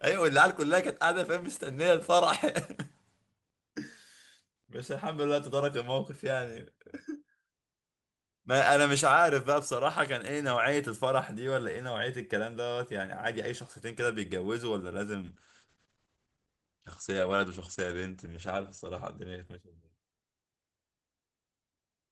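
From 15.23 s to 21.39 s a call bitrate drop sets in: the encoder starts coding far more coarsely, which fits a fall from 32 to 11 kbps, and the speech turns rough and muffled, worst for about 3.3 s. On a spectrogram the top band vanishes, cut from 20 kHz to 8 kHz.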